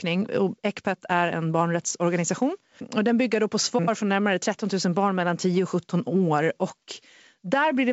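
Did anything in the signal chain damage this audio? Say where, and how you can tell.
No, nothing in the chain has harmed this speech, which comes through the G.722 wideband telephone coding at 64 kbit/s with at most a faint trace of the codec in the upper band.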